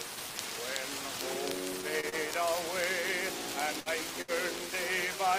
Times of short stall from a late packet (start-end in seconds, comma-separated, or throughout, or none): 2.00-2.15